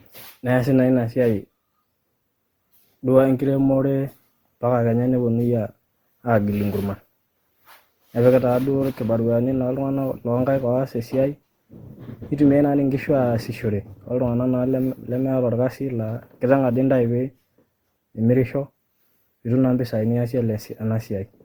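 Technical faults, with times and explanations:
Throughout, generation loss: the speech has a swirly, smeared, hollow quality, with consonant onsets going soft and a fizzy layer of noise sitting under everything, and nothing above about 20.3 kHz. That's more damage than a single lossy encode would cause. It likely comes from around ten passes through an Opus-style codec at something near 64 kbit/s, each pass quantising on a shifted frame grid so the noise piles up.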